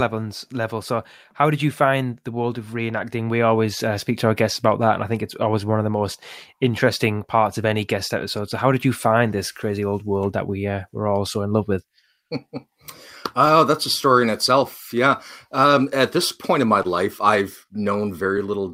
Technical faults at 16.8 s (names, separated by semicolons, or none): clock drift between sender and receiver; repeated timing corrections; short stall from a late packet